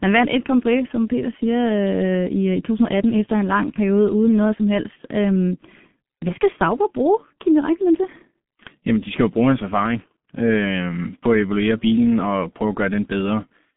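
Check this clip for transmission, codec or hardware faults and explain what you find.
The whole clip has gone through the G.723.1 codec, and it's heavily damaged. The speech sits in a narrow phone band of about 150 Hz to 3.5 kHz with nothing above 3.7 kHz, carried in a stream of roughly 6.3 kbit/s. The codec rebuilds the voice from a coarse model updated only every 30 ms frame, so it sounds muffled and hoarse and the consonants smear together.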